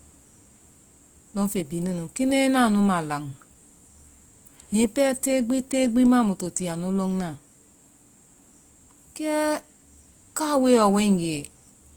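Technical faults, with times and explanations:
Throughout: Opus compression. The encoder likely ran in its music (CELT) mode at a low bitrate, which fits about 24 kbps. With too few bits, it kept each band's overall energy but filled bands with folded copies of lower ones or with noise. The speech sounds plainly grainy, rough and noisy in texture rather than swirly. The bandwidth stays full, reaching about 20.2 kHz.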